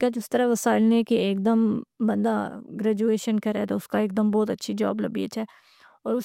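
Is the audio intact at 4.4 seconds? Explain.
Yes, the audio is intact at 4.4 seconds, with no audible fault at that moment.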